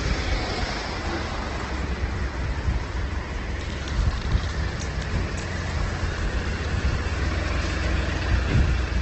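From start to finish the sound is grainy, rough and noisy in texture, with nothing audible above about 8.3 kHz. That points to heavy Opus compression, likely in its music mode at a very low rate near 12 kbps, filling starved bands with noise and narrowing bandwidth.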